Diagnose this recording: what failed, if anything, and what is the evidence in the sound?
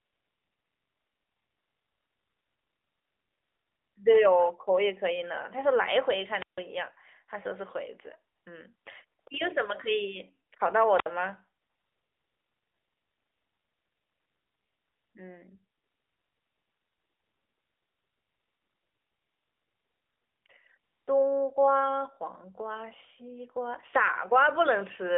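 AMR comfort noise, at the codec's silence-handling stage. The real background is replaced by smooth, steady synthetic noise at 0.00–3.96 s, 8.36–8.46, 8.76–8.86, 9.20–9.26, 10.50, 11.62–15.14, 15.78–20.46 and 20.78–21.08 s. The phone judged these stretches silent and stopped sending speech frames. The receiver then filled them with generated noise. The short bursts of 20 to 100 ms switch in and out around speech.

Wireless microphone squelch dropout, in the analogue radio link before the phone. At 6.36–6.63 s, hiss rises and then the audio mutes for about 150 ms. At 10.93–11.12 s, there is a shorter mute of about 60 ms. The FM signal faded, and the receiver's squelch shut the output until it recovered. The narrowband telephone band, roughly 300 Hz to 3.6 kHz, carries the sound with light coding damage, which fits AMR-NB at 12.2 kbps.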